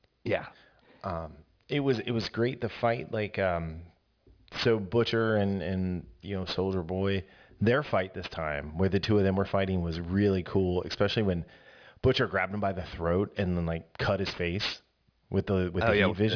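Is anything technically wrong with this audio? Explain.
Yes, there is aliasing throughout the speech. The audio appears to have been resampled down, which fits a drop from 44.1 kHz to 11 kHz without an anti-aliasing filter. Content above 5.5 kHz folds back into the band, adding gritty, metallic sibilants roughly 20 dB below the speech.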